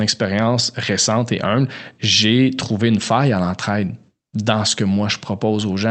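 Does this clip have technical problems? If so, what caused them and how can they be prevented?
No, no technical problems here.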